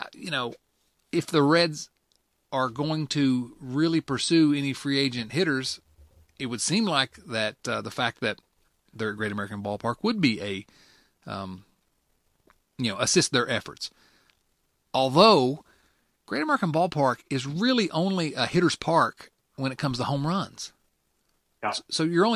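No technical faults are audible.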